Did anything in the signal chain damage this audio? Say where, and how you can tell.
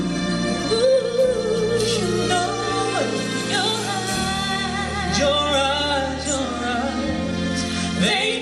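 No, nothing along the chain from capture to playback has left a mark I can hear here, so there's no stage to point to.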